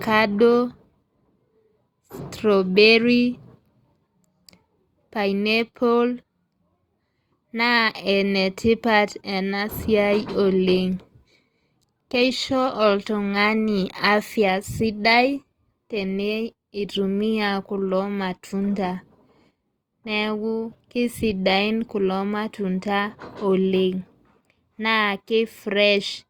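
From 10.02 s to 22.02 s the speech switches abruptly to an adaptive stream at a lower bitrate, consistent with a step down from about 64 to 24 kbit/s Opus as the connection slowed. Codec artefacts thicken for those 12 s, and quality snaps back at 22.02 s. The audio never stops, which separates this from a dropout or packet loss. The band still reaches 20.2 kHz, so this is not a bandwidth cut.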